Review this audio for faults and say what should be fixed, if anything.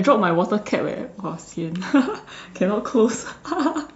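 No faults found; nothing needs fixing.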